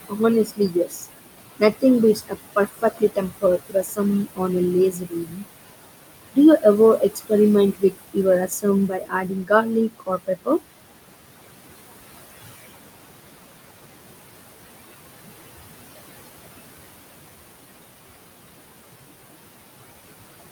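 Speech, with room noise about 12 dB below the voice. Noise suppressor artifacts run throughout: the suppressor pulls the background down by about 20 dB. Speech is cut by the noise suppressor at 0.09–1.06, 2.15–4.41, 4.91–5.44, 6.98–7.31, 7.73–8.17 and 8.48–10.61 s. Quiet parts of the speech get mistaken for noise and drop by up to about 21 dB, so they sound swallowed.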